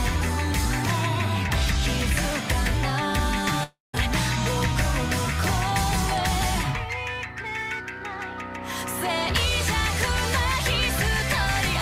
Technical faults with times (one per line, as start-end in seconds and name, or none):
3.63-3.95 long network dropout